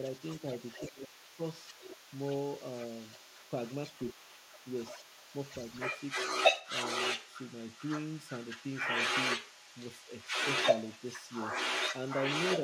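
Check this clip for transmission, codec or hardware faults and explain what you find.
Two faults are present, both tied to the far end of a call being picked up and mishandled at the talker's side.

Other side's voice leaking through runs from 0.0 s to the end of the clip. A second voice sits under the talker throughout, at roughly the same loudness. This is likely an echo canceller that failed to strip the loudspeaker's playback of the remote party out of the microphone signal, so that playback is sent back down the line.

Speech suppressed in double talk occurs at 0.80–1.40 s and again at 3.98–4.24 s. In the first stretch the talker's level drops sharply, by around 20 dB at its deepest, for about half a second; in the second it dips only a few dB for a brief moment. The likely cause is the canceller meeting both sides speaking together, failing to tell the talker from the echo, and attenuating everything it picked up.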